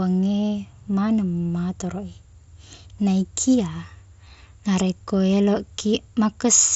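No technical faults are audible in this speech.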